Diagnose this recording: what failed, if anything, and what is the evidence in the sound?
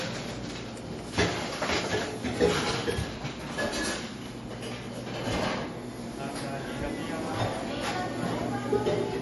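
The codec stage failed: the audio was most likely squeezed through MP3 compression at too low a bitrate, and the damage is plainly audible from start to finish. Nothing survives above 11.5 kHz, a hard treble ceiling imposed by an encoder short of bits, which fits a rate around 48 kbps. Weak frequency lines flicker in and out between frames, giving the sound a watery, swirling texture, metallic chirps on bright hiss-like content, and smeared attacks.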